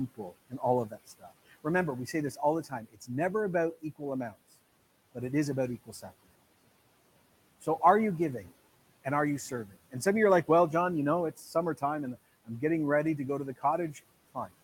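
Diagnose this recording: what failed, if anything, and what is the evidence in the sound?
The failure is in call processing: speech cut by the noise suppressor. Parts of the speech are pulled down by about 12 to 18 dB in spans at 0.15–3.09 s, 3.82–4.35 s, 5.86–6.25 s, 9.04–10.49 s, 11.36–12.62 s and 13.58–14.53 s, with the longest one affecting roughly half a second in total. The room noise, about 21 dB under the speech, is taken as the noise floor by the suppressor, so low-level speech falls below its threshold and is attenuated with it. These dips are partial fades rather than true dropouts, which would go fully silent.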